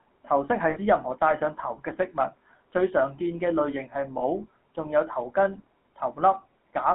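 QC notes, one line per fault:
throughout: GSM full-rate codec. The speech carries a buzzy, gravelly roughness and is confined to roughly 200 Hz to 3.4 kHz. The coder rebuilds the voice from a vocal-tract filter driven by a sparse, regularly spaced pulse train, so fine detail in the excitation is lost and replaced by a coarse buzz. That excitation buzz, together with the bandwidth, points to the 13 kbps full-rate coder. A plain low-bitrate MP3 or AAC would sound swirly or watery instead.
0.70–0.78 s and 4.18–4.22 s: lost GSM frames. At each point the sound briefly locks into a rough, metallic ring instead of moving on. The first drop covers about 60 ms, which fits three consecutive 20 ms frames. The second is shorter and fits a single frame. The decoder repeats the last good frame's settings, which produces the frozen, ringing tone. A dropout in uncompressed audio would instead give a hard gap or click.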